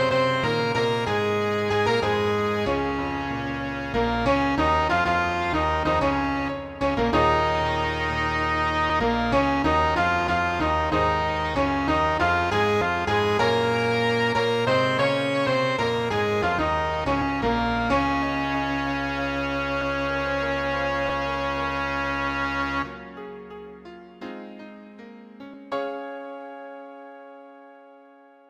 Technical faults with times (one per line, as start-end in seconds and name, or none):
0.43 compressed frames skipped
8.89 compressed frames skipped
12.81 compressed frames skipped
17.21 compressed frames skipped
25.53 compressed frames skipped